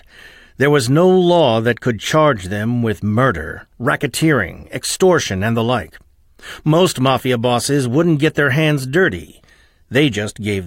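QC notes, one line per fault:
No faults turned up on a listen through this speech clip, so there's nothing to log here.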